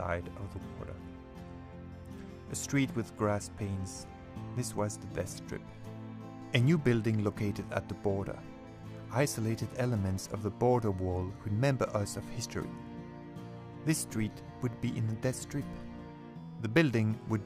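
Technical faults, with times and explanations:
No technical faults can be heard anywhere in the audio, and the signal stays continuous at every moment.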